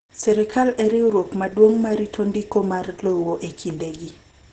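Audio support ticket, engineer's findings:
Opus voice compression, whole clip. Speech muffled, hoarse, slightly robotic. Nothing above about 9.4 kHz. Heavy codec damage, which fits SILK-mode coding at roughly 10 kbps. The linear-prediction coder narrows the band and quantises the excitation coarsely. Unlike a plain low-pass filter, which only dulls the sound, this adds rough, buzzy texture to the voice itself.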